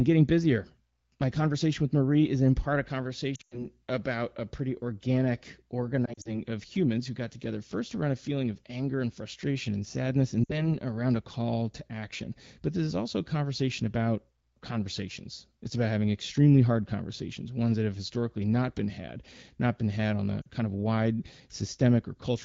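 Lost AMR speech frames hit at 3.35–3.65 s after "is in part a", 6.05–6.38 s before "of humans who got", 10.44–10.74 s after "frustration and sadness and", and 20.41–20.46 s. Radio errors corrupted frames, and the wideband decoder patched them with fading copies. The first, worst burst drops to near silence within two frames during a run of about 100 ms. The others are brief dips and dropouts.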